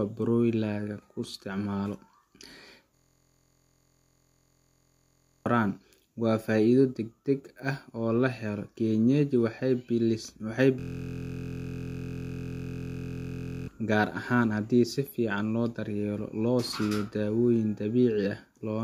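Speech with a steady 43.1 Hz buzz from 2.95 to 5.46 s and again from 10.80 to 13.68 s, just before "gaar ahaan haddii si". This is a system hang loop: a 23.22 ms piece, which fits a 1024-sample buffer, repeats while about three seconds of audio are lost each time.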